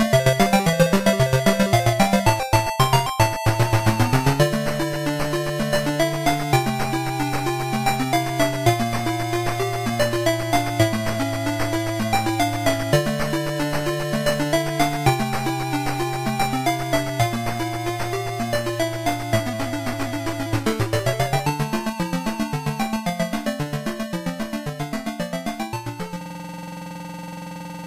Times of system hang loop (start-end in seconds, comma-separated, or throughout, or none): 26.21-27.87